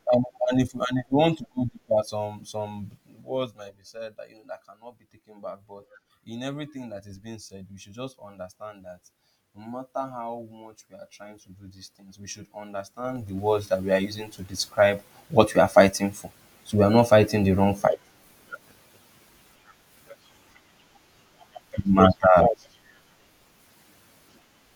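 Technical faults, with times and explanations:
2.85–3.90 s and 12.99–13.47 s, zipper noise: after "to go deeper some" the level drops about 15 dB, then after "these things we should" it rises about 15 dB, both in unsmoothed 3 dB steps (around four, then around ten a second), each clicking.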